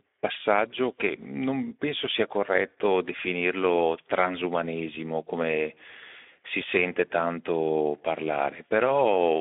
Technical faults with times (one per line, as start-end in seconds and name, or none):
0.00-9.40 Speex codec